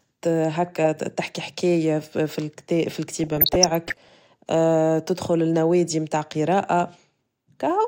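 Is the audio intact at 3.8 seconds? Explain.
No. At 3.8 seconds the speech sits inside a stretch of DAB burbling that runs from about 3.16 to 4.09 s. Weak reception lets bit errors slip past the error correction, roughly a few in every thousand bits. Corrupted samples in the MP2 data put short blips of noise into single sub-bands, and corrupted scale factors make sub-bands jump in level for up to a frame. The result is bubbling, watery blips laid over the speech.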